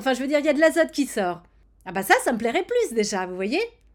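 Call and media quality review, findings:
No audible faults found in this speech recording.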